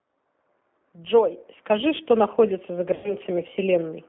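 A speech recording with a narrow, slightly rough and synthetic quality throughout, all its sound held between about 200 Hz and 3.5 kHz. That is the signature of the G.729 codec, here the G.729A variant, which fits an 8 kbit/s stream. Rather than carrying the waveform, it rebuilds the voice from a vocal tract filter, a pitch predictor and a few pulses per frame. The damage is plainly audible as a rough, synthetic texture. At 0.42 to 0.46 s the voice briefly smears into a stretched sound and then sounds weak or distorted, consistent with about 20 ms of missing audio, likely a single lost packet. A longer gap at 2.94 to 3.14 s covers about 100 ms lost, which fits five packets. There the stretched sound drags on and fades before the voice recovers. Both are VoIP packet loss concealed by the speech codec: the decoder extends its last pitch and filter with falling gain, and because each frame builds on the previous one, the distortion lingers after the packets return.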